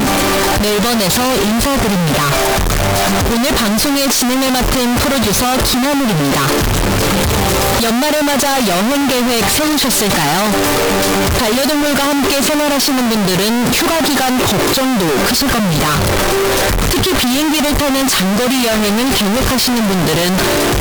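From the first moment to the end, the audio is a harsh, nearly square-edged roar sitting at an almost fixed, high level, with quiet passages and background noise pushed up as loud as everything else. This is float read as integer: 32-bit float samples were likely interpreted as 32-bit integers, so sign and exponent bits dictate level. Unlike ordinary clipping, the loudness doesn't track the original dynamics, yet pitch contours remain followable.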